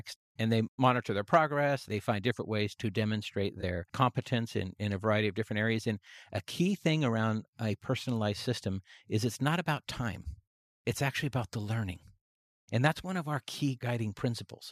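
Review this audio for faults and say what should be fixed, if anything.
No faults found; nothing needs fixing.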